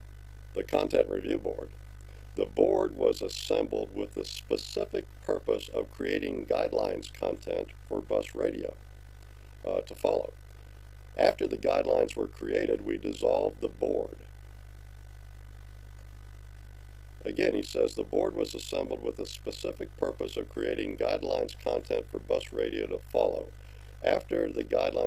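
From the start to the end, a steady low tone sits under the sound. This is mains hum at 60 Hz, about 20 dB below the signal. A ground loop or nearby transformer has leaked the power line into the audio path, adding low harmonics too.

Throughout as well, the level flutters rapidly, at roughly 50 times a second. This is overlap-add ripple. The audio was split into windowed frames and rejoined with an overlap that does not sum evenly. The gain dips once per frame, about 60 dB deep, giving a rough tremolo.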